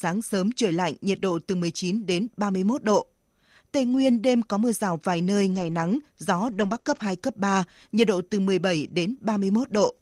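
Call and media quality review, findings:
Lost packet rebuilt from error correction: network packet loss, gaps covered by low-bitrate Opus in-band FEC copies, so no dropouts. Short rougher, noisier patches at 1.21–1.23 s after "sớm trời lạnh nhiệt", 3.91–3.97 s before "đêm có mưa rào", 5.51–5.73 s after "mưa rào vài nơi", 6.47–6.77 s, 6.87–7.01 s, 8.87–8.89 s.

Short concealed packet loss: two back-to-back 20 ms frames at 6.79–6.87 s, late or lost with no FEC copy available. Decoder concealment extended the preceding sound, then blended back into real audio. Heard as a brief smear inside the rough 6.47–7.01 s stretch.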